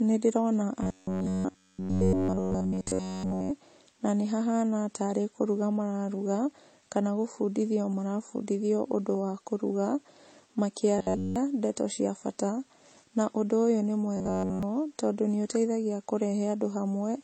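From start to finish the speech shows signs of transcoding between lossy codecs. The top end is cut off, so it sounds dull. Two kinds of coding damage overlap: smeared, swirly detail and a thin, hollow sheen. The likely cause is an MP3 encode that was later re-encoded as HE-AAC, which fits low rates of around 32 kbit/s. The second codec spent its bits on the first one's flaws. The lowest band limit in the chain carried through.

From 0.83 to 3.51 s the speech turns into a rigid, metallic buzz. This is robotic sound from repeated short buffers. The buzz sits at 93.8 Hz. That fits a block of about 10.7 ms being played again and again, which is likely caused by new audio arriving too late. The stretch seems to be entirely repeats. Clear speech returns with "na nĩ hahana tarĩ". The same buzz comes back briefly from 10.98 to 11.36 s, just before "ndeto cia bata". It occurs again from 14.17 to 14.63 s, ending at "tondũ nĩ ũteithagia".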